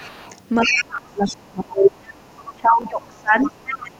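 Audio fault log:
0.0–0.38 s, 0.61–0.84 s, 1.27–1.34 s, 1.79–2.56 s, 3.44–3.82 s, other side's voice leaking through: the echo canceller likely failed to strip the far end's loudspeaker playback from the microphone signal, so a second voice rides under this talker. It ranges from a faint scrap roughly 25 dB down at the start to near-equal level across 1.79–2.56 s.
0.67–1.91 s, 2.55–3.56 s, 3.82–4.00 s, speech suppressed in double talk: with both sides talking at once, the canceller likely could not tell the near talker from the echo and turned the whole signal down. The talker's speech sinks in level. The deepest dip is about 30 dB in the first stretch and about 25 dB in the later two, each lasting about a second except the brief tail at the end.
0.96–0.98 s, 2.82–2.84 s, repeated buffer: fresh audio arrived late, so the device played the previous block a second time. Each repeat spans about 21 ms, which fits a 1024-sample buffer. 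There are hard joins at both ends, and about 20 ms of new sound is lost at each point.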